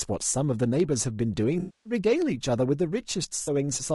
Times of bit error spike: 0.80, 2.22

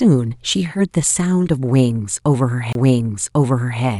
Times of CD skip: 2.73-2.75

